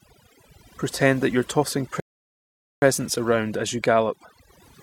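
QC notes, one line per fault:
throughout: overdone noise removal. The background drops and breaks up into twinkling specks. The reduction is set too hard, so each frequency band that drops near the tool's estimate of the noise floor is pushed far down or cut entirely, taking the quieter parts of the speech with it. Unlike a noise gate, which silences everything at once, this works band by band, which is why isolated tonal specks flicker on.
2.00–2.82 s: rebuffering stall. The audio halts into silence for about 0.82 s and then picks up at exactly the point where it stopped. The player ran out of downloaded audio and waited for more before continuing. This is what separates it from a dropout or packet loss, where the gap replaces sound and some of the speech is missing. Here nothing is skipped, and the clip simply gains 0.82 s of silence.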